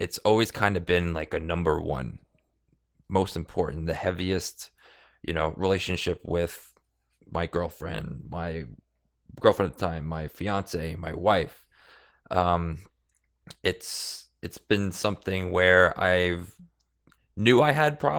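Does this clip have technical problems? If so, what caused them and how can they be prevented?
Yes. Throughout the clip the speech sounds hoarse, grainy and slightly robotic, which is plainly audible Opus voice compression. The coarse texture points to a low bitrate, around 16 kbps, in Opus's hybrid mode, where a linear-prediction coder handles the band below 8 kHz and a transform layer covers the rest up to about 20 kHz. At that rate the excitation is coded too crudely to stay natural. To prevent this, encode voice at a higher bitrate, 32 kbps or more.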